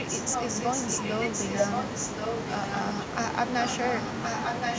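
Speech with an echo leak: a delayed copy of the talker comes back in scraps at 0.32–0.45 s, 0.61–0.68 s, 1.49–1.84 s, 2.11–2.51 s and 3.63–4.78 s, each trailing the original by about 1.07 s. Most are roughly as loud as the speech, with the 0.61 s and 2.11 s scraps quieter. The likely cause is a loudspeaker-side echo canceller letting residue through. On a spectrogram, harmonic patterns repeat about a second later, stacked over the live speech, and all energy stops at 8 kHz.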